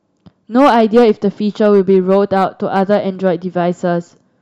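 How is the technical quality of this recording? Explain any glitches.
The recording has a clear problem: hard clipping in two stretches of the speech. The first runs from about 0.58 to 1.11 s and is pushed roughly 6 dB past the ceiling, so it comes across as crackle on the peaks. The second, 1.61 to 3.28 s, overshoots by about 3 dB and comes across as a crackle on the louder moments. In both, the level exceeds what the chain can pass, the peaks get sliced flat, and those squared-off tops spray high harmonics across the top end.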